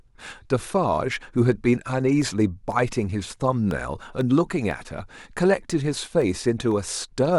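From 2.22 to 7.22 s, periodic USB or driver dropouts blank about half a millisecond of speech every 0.5 s, producing regular ticks.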